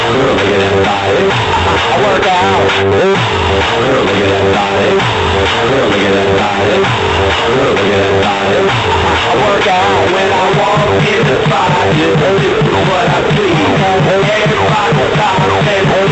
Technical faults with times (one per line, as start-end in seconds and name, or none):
none